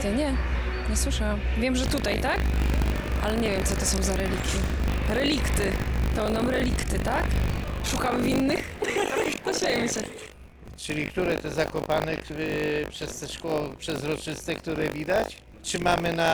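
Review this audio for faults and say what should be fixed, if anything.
There's buffer tearing from 1.82 s right to the end: a steady 50 Hz robotic rattle riding on the sound. The writer and hardware read point have drifted, so every 20 ms period carries a small slice of audio from around 70 ms earlier, hard-joined on both sides. To prevent it, keep the write pointer a safe margin ahead of the read pointer and resync on underrun.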